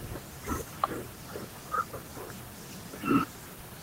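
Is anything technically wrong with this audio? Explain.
No, nothing technically wrong shows up in this speech recording.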